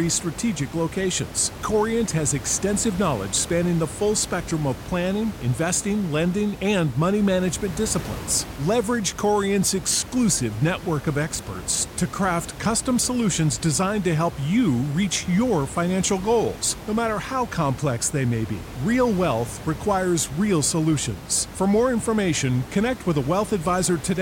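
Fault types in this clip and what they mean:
No faults can be heard in this speech clip. The room noise sits about 14 dB below the speech and belongs to the recording itself.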